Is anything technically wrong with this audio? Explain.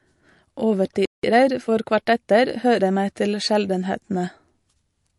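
Yes, there are three problems here.

The whole clip carries MP3 compression damage, and it's plainly audible. It's likely a low-bitrate encode, roughly what you'd get around 48 kbps. The encoder clipped the treble and kept dropping weak frequency lines frame to frame, so the speech sounds watery and swirly, with chirpy, metallic s sounds and smeared onsets.

At 1.05 s there's a playback stall: the speech just stops dead for about 180 ms, until 1.23 s. That's likely the player starving for data or having its thread blocked, leaving the output silent until it caught up and resumed.

Right after, from 1.23 to 3.03 s, you get time-compressed catch-up. The player trims its backlog by snipping out and cross-fading tiny chunks, so the speech runs about 1.1 times fast at normal pitch, sounding hurried.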